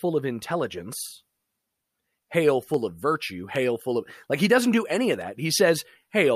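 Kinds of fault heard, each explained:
Dropped samples: sharp clicks at 2.74 and 3.56 s, likely where a fraction of a millisecond went missing; thin vertical spectrogram lines, abrupt waveform jumps.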